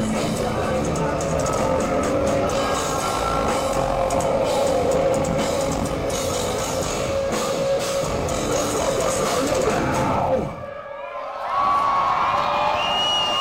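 A filter restarted on every block runs through the whole clip: the filter discards its memory at each block boundary and begins again from silence, so every block opens with a small start-up transient. Those transients repeat at 200 Hz, which points to processing blocks about 5 ms long, and they are heard as a steady buzz at that rate that rises and falls with the level of the audio from start to finish.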